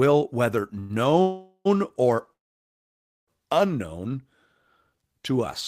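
Three call audio freezes, at 0.79 to 0.92 s, 1.22 to 1.67 s and 2.33 to 3.29 s, were likely caused by delayed packets draining the jitter buffer. The last sound is extended as a fading buzz, briefly silent before 1.67 s and almost entirely silent in the 0.94 s gap. Speech then resumes where it stopped with nothing lost, which distinguishes these from dropouts.

From 4.90 to 5.34 s, a jitter buffer slow-down repeats pitch periods and adds 76 ms, so the speech plays at about 85% speed. Unlike a drag in playback speed, the pitch does not drop.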